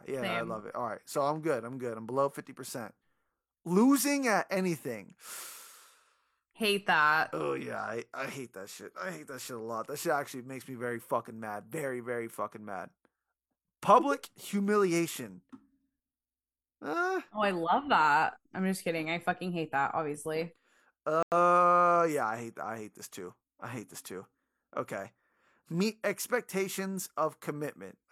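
A speech clip with a corrupt frame muted at 21.23 to 21.37 s: damaged bits in the compressed stream made the decoder reject a short run of frames, which fits about three, and the player substituted silence. The result is an abrupt hole of about 0.15 s, with timing preserved.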